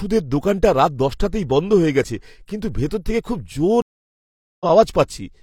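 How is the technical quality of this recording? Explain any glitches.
The recording has one clear glitch, a stream reconnect. From 3.82 to 4.65 s, just after "ভেতর থেকে খুব জোর", the speech cuts to about 0.79 s of silence, then resumes roughly a third of a second further on than where it stopped. The connection dropped, the player went quiet, then reconnected and started a new decoder mid-stream. It lost its place, so some speech is simply skipped and the first moment back comes in muted or faded. Unlike a plain dropout, which leaves a gap but picks up where it left off, this gap is followed by a jump ahead in the speech.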